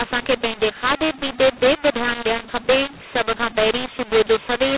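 Mu-law and A-law mixed up throughout this speech clip: audio coded as G.711 mu-law was decoded as A-law, scrambling sample levels, so speech turns harsh and pauses fill with hiss.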